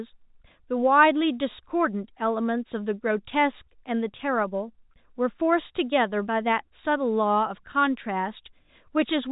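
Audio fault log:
No faults found; the speech carries the narrow band of G.711 telephone coding, with nothing heard above about 3.8 kHz.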